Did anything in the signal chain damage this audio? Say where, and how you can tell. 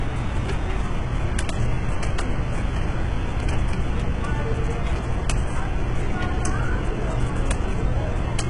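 Yes, at the codec stage, and it runs through the whole clip. The treble is bright but sounds synthetic. Transients and high detail come out gritty and metallic, and nothing survives above about 11.1 kHz. This is likely HE-AAC compression at a very low rate, near 12 kbps. At that rate only the lower band is really coded. The upper band is rebuilt by copying lower content upward under a coarse envelope. Its harmonics no longer line up, so the top end turns rough.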